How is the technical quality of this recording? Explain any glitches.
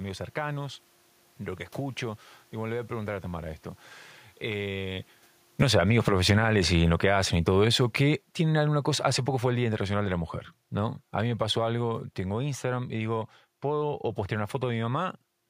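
The recording has one clear fault, a falling automatic gain. From 5.47 s to 12.53 s, starting just before "y digo", the gain control treats the input as too loud or its background noise as too strong and lowers its gain by about 14 dB. Speech and room noise sink together, so the waveform envelope tapers steadily and the spectrogram's background floor darkens along with the voice. The level shift around 5 s comes from the talker moving and is separate from this fault.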